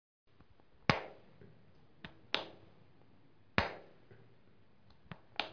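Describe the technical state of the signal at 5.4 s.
At 5.4 s the signal is intact, with no dropout, distortion, glitch or other technical fault present at that moment.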